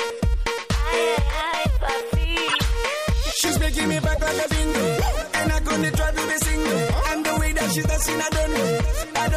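Two short bursts of wrong-sounding noise cut into the audio, from 2.48 to 2.66 s and from 4.15 to 4.19 s. Each is a corrupt frame decoded: damaged bits in several compressed frames were played anyway, so misread codes spread energy across the wrong frequencies.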